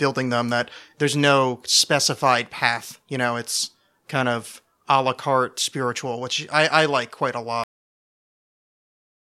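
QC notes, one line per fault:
7.64–9.25 s cut-off end: right after "I like quite a" the speech just stops dead into digital silence, no decay, since the final stretch never got written out.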